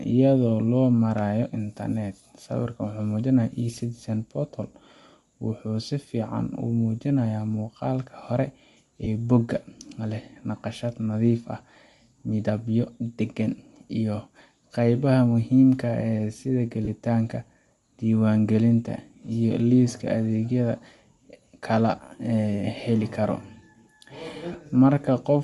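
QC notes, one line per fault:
Throughout: Bluetooth LC3 compression. The speech has a plainly audible breathy, grainy edge in the upper range, where the codec fills thinned-out spectrum with noise. The character fits a 48 kbps stream with 7.5 ms frames, most likely LC3 over LE Audio.
9.04–9.07 s, 16.84–16.88 s and 24.52–24.55 s: lost LE Audio frames. Each is a brief noisy smear, about 22.5, 30 and 22.5 ms long. That fits three, four and three missing frames, patched by replaying the last spectrum with scrambled signs, so voiced sound turns hissy for an instant.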